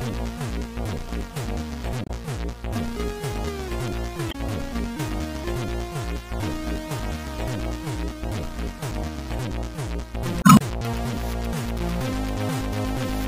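Three short glitches break into the audio at 2.03 to 2.10 s, 4.28 to 4.35 s, and a longer one at 10.39 to 10.62 s. This is damaged data in a compressed stream: at those points the encoded bytes were lost or corrupted, so the decoder misread the affected frames, lost sync, and had to hunt for the next valid frame header before playback recovered.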